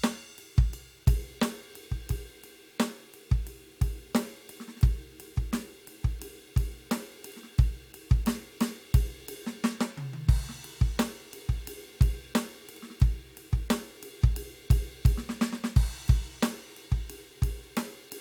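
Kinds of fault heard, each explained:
Low bit depth without dither: The music carries a grainy, gritty distortion that tracks the signal throughout, roughest in quiet passages where faint detail sputters or breaks up. The likely cause is rounding to about 9 bits without dither, leaving an error about 35 dB below the music.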